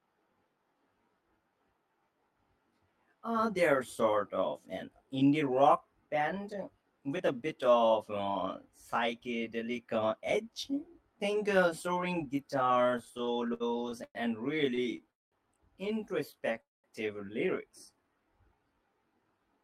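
Throughout the speech, channel delay (comb filtering) of around 20 ms summed to mono gives a rough, slightly doubled tone, seen as closely spaced fixed horizontal notch bands across the spectrogram.

From 12.91 to 14.18 s and again from 14.75 to 15.08 s, repeated stalls (stutter) make the speech drag and hiccup. Late packets repeatedly emptied the jitter buffer, and the receiver stretched the last sound. The first span has ten gaps up to 111 ms, and the second has four short ones. On the waveform these appear as smeared, repeated fragments.

At 15.11 to 15.35 s and 16.61 to 16.87 s, a call audio freeze fills about 0.2 s with a fading buzz and then near-silence before the speech resumes unbroken. It was likely caused by packets held up in transit, and it shows as flat, empty stretches in the waveform.

From 17.72 to 18.75 s, a jitter buffer slow-down plays the speech at about 88% speed with unchanged pitch, drawing sounds out as repeated pitch periods that look like stretched, evenly repeating cycles.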